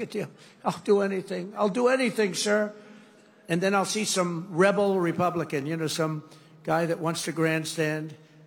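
Sample clock jitter from 4.85 s to the end: a converter clock wobbling by several microseconds mistimes samples, leaving a hiss roughly 25 dB down.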